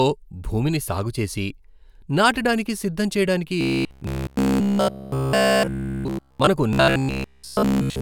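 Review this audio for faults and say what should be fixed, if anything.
Robotic sound from repeated short buffers runs from 3.61 to 6.47 s, after "నాటడానికి సిద్ధం చేయడానికి", and again from 6.73 to 8.01 s. A rigid 66.8 Hz buzz replaces the speech, likely from a 15 ms chunk looping. Give the audio path steadier delivery or a larger jitter buffer.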